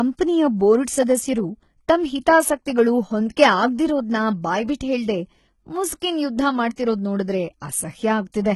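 All the way through, the speech has that thin, coarse treble where the upper band is rebuilt rather than coded. That's most likely HE-AAC compression with band replication at a very low bitrate, somewhere around 16 kbps, so sibilants come out gritty and lispy.

Then there's pre-echo at 6.00 to 6.02 s, 6.76 to 6.78 s and 7.60 s: a brief hiss, 15 to 20 ms long, right before sharp attacks. The codec smeared quantisation noise across each block, softening those onsets.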